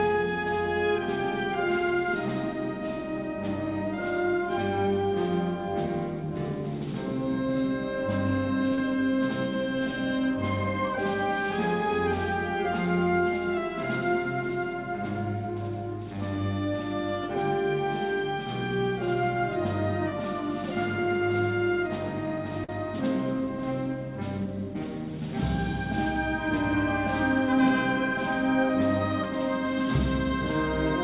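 At 8.74 s and again at 22.64 s there's short concealed packet loss: a few hundredths of a second went missing and got patched by extending the previous sound, heard as a brief smear, all within a band that stops at 4 kHz.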